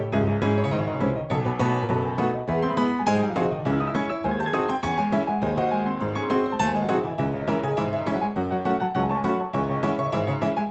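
No technical faults are audible in this audio.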